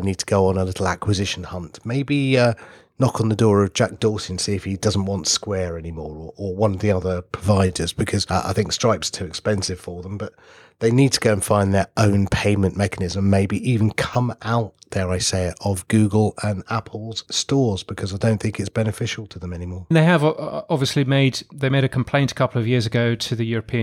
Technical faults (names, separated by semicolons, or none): chunks out of order